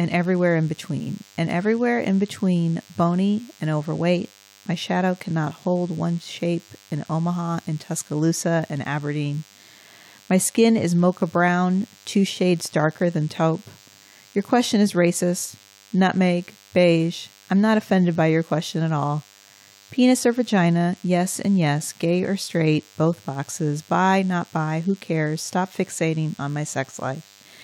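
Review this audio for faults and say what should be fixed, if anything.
DECT cordless phone buzz runs throughout the speech, about 30 dB down: a nearby handset's 100 Hz radio bursts get rectified, showing as evenly spaced harmonic lines on a spectrogram. Keep DECT phones and base stations away from microphones and cables.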